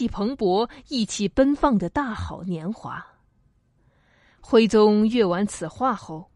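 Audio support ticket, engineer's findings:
No audible fault found in the speech clip. Nothing to attribute to any component; closing without action.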